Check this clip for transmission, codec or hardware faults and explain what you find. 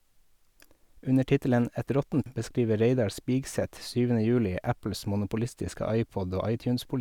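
One fault. At 2.26 s there is damaged data in the compressed stream. Corrupted frames throw the decoder out of sync, so a brief glitch follows.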